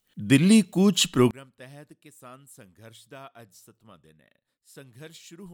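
From 1.31 s to the end of the clip, the speech falls by about 27 dB to a faint copy, which points to one channel inverted. The likely cause is one stereo side carrying reversed polarity, so the centred speech cancels when the two sides are summed to mono, leaving only their small difference. Unlike a dropout or a gain cut, a faint residue persists.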